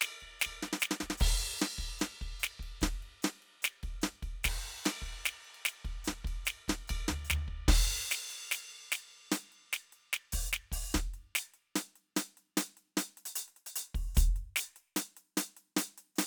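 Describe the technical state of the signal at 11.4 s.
At 11.4 s the music comes through intact, with no audible dropout, click, distortion or other fault at that moment.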